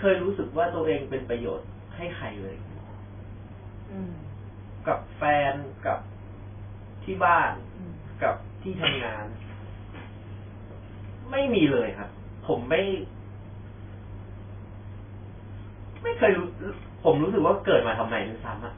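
MP3 compression runs through the whole recording: the speech has nothing above 3.5 kHz and a heavily watery, swirling texture, likely from an encoder starved of bits, which points to a rate around 16 kbps. Weak frequency lines flicker in and out between frames, giving s sounds a metallic chirp and smearing attacks.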